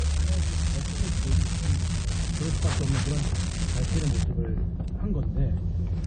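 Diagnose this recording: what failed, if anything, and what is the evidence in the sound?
Low-bitrate audio saved at a high bitrate, throughout, at the codec stage: nothing above 9.1 kHz. The likely cause is a low-bitrate MP3 re-encoded at a high bitrate, which cannot restore the removed band.

Unreliable data bit, from 0.00 to 4.23 s, at the converter or storage stage: a steady crackle of equal-sized spikes, heard even between sounds, from one marginal bit randomly flipping.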